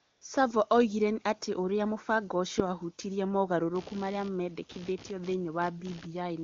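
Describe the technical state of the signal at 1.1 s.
At 1.1 s the speech signal is intact, carried through the AMR wideband (HD Voice) codec at its 23.85 kbit/s top rate with no audible fault at that moment.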